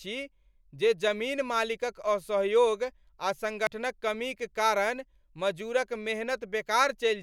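A speech clip with a dropped buffer (overrun) at 3.67 s, just before "कमीक कारण मजूरक": an abrupt jump, roughly 40 ms of sound skipped. Unlike a dropout, no silent gap opens; the edges butt together, likely from samples overwritten before being read.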